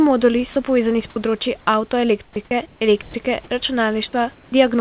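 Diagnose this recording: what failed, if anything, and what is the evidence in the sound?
Sound dropped by the voice detector, at 0.53–0.56 s just before "povezani s področji", 2.45–2.51 s and 3.02–3.14 s. Brief pieces of speech vanish into flat, steady noise. In call processing, the sender's voice activity detector likely took quiet speech for background and stopped transmitting, so the receiver substituted comfort noise.

Comfort noise in place of the background, at 2.24–2.36 s, 2.66–2.81 s and 4.34–4.52 s. The room's natural background turns into smooth, featureless hiss, about 10 dB quieter in the first gap, about 4 dB quieter in the last, and at the same level in the second. Discontinuous transmission likely paused sending there, and the receiver synthesised background-shaped noise.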